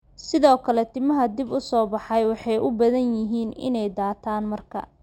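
Speech carries imaging from linear upsampling from start to finish: the audio was raised from 12 kHz to 48 kHz by straight-line interpolation, so the top below 6 kHz is dulled while a faint mirrored copy of the spectrum, roughly 30 dB down, fills 6 to 12 kHz and adds a thin metallic shimmer on sibilants. Plain band-limiting would leave nothing above 6 kHz, and aliasing would fold tones downward; here the extra content mirrors the real band upward.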